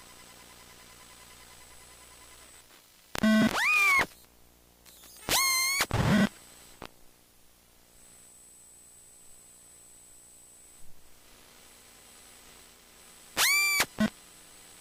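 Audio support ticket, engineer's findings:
Nothing stood out on listening to this recording of sounds.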